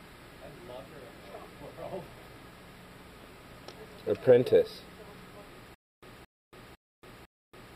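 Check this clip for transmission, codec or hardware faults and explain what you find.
One playback fault appears near the end of the clip.

Stutter with silent gaps, from 5.74 s to the end: a short fragment of about 221 ms plays, then cuts to digital silence for about 282 ms, and the pair repeats at a steady 503 ms period, four times in all. The likely cause is a stalled stream or player that replays its last buffered chunk on each retry and then runs dry. The audio that should have filled that stretch never arrives, so the clip ends on a stuttering loop.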